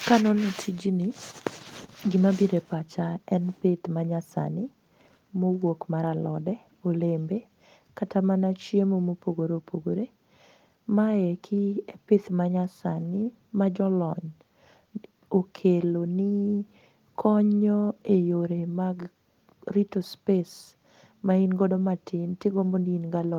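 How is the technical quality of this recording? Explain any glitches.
No glitches or faults are audible.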